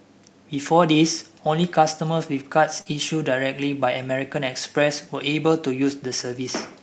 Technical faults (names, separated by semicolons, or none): short concealed packet loss; lost packet rebuilt from error correction